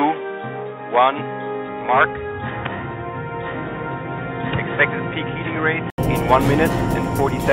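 From the start until 5.98 s the sound is dull and boxy, with nothing above 3.8 kHz, a slightly lower level (roughly 5 dB down) and a faint noise floor of its own some 40 dB below the signal. It then clears after an 80 ms silence. This is likely an input switched to a poorer device, with the system returning to the better input at that point. On a spectrogram the upper band is empty until 5.98 s and then fills in abruptly. The waveform shows a short flat gap, followed by larger amplitudes.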